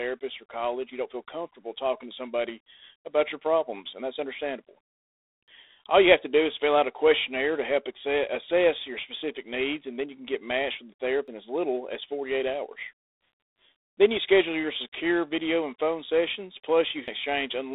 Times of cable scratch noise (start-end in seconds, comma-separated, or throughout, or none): none